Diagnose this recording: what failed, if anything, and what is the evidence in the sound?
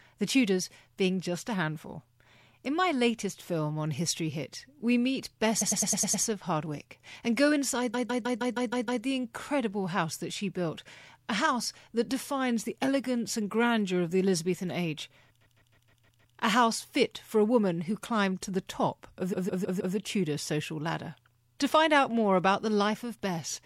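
Repeated frames at the codec or storage stage: short compressed runs replay, so the speech stutters in 104.5 and 156.7 ms loops at 5.61–6.23, 7.93–9.03, 15.40–16.34 and 19.32–19.95 s.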